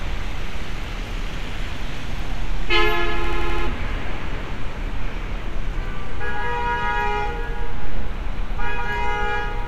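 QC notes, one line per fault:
3.24–3.67 s: system hang loop. A single 85 ms slice of the sound repeats five times at about 11.7 Hz, producing a hard, machine-gun stutter instead of continuous audio. The host or driver stalled while the output hardware kept replaying the same ring buffer, whose length fits a 4096-sample buffer. Roughly 0.4 s of the original material never plays, so the sound resumes with a jump after the stutter.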